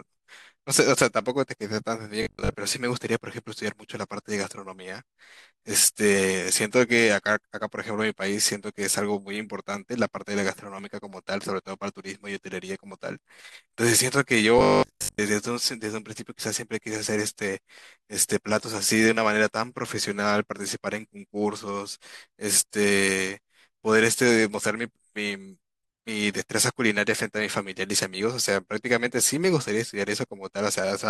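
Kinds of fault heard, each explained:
Robotic sound from repeated short buffers: audio likely arrived too seldom, so playback kept looping the last fragment, which fits a 20 ms buffer, and skipped most of the real audio. At 2.2–2.5 s and 14.6–15.2 s, the speech becomes a rigid, metallic 50 Hz buzz.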